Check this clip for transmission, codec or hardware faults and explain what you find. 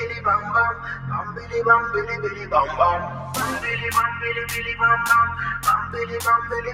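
A noise suppressor built for speech runs over this sound throughout. Steady parts are taken for noise and pulled down, so the level swings by roughly 10 dB. Held material and tails thin and pump while attacks pass through.

Sound cut by the noise suppressor occurs at 0.74 to 1.05 s, 1.28 to 1.53 s and 3.1 to 3.33 s. Each time the suppressor clamps down, dropping the sound by about 7, 6 and 5 dB. Sustained content sinks or its decay is cut short.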